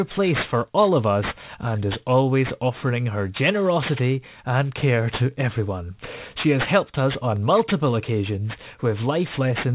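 Aliasing runs through the whole speech clip. The audio was downsampled without a proper low-pass filter, which fits a drop to an 8 kHz rate. Energy above the 4 kHz fold point reflects back as false tones, roughly 15 dB below the speech. Sibilants turn gritty and metallic.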